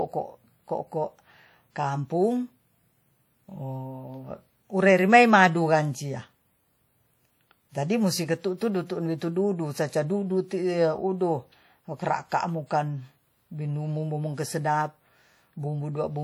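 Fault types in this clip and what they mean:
WMA compression: the speech has a ringing, washy quality and a hiss that swells and fades with it, likely from a WMA-style transform codec spreading quantisation noise over long blocks. It's plainly audible, fits about 48 kbps, and nothing sits above 20.1 kHz.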